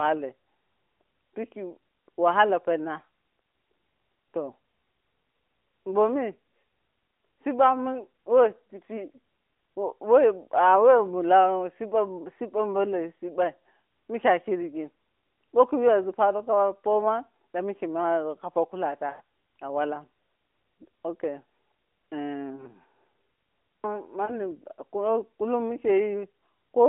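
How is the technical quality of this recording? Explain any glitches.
The recording has three short dropouts from lost AMR speech frames, heard through an AMR narrowband phone link whose band runs from about 250 Hz to 3.5 kHz and whose mild coarseness fits the 12.2 kbps mode.

From 19.10 to 19.21 s, between "mawego kapo" and "a walan", the sound stretches, blurs and fades for about 100 ms, which fits five consecutive 20 ms frames being corrupted in transmission. The decoder kept repeating the last good pitch and vocal-tract settings at falling gain, then resumed slightly rough. Brief single-frame dips or warbles, each consistent with one 20 ms frame lost, occur at 22.56 to 22.69 s and 24.26 to 24.35 s.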